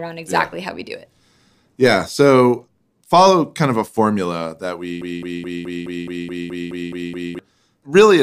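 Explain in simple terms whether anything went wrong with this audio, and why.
Something did go wrong. Just after the words "of a formula that", at 5.02 s, the speech turns into a broken-record loop. A short piece, about 0.21 s long, plays again and again, 11 times in a row, until 7.39 s. Each repeat is identical. The most likely cause is that the player or stream stalled and kept sending the last bit it still held. Whatever was said during those seconds is missing.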